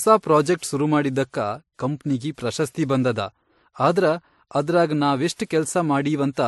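Throughout the speech, nothing reaches above 11.9 kHz, a flat spectrogram ceiling, with different codec artefacts layered together, likely from transcoding between lossy codecs, a WMA-then-MP3 chain.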